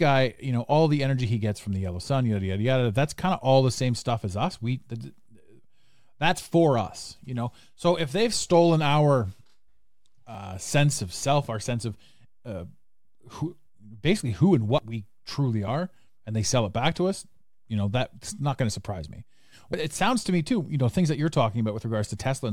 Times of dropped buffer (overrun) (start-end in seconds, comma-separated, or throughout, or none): 10.35, 14.78, 15.68, 19.73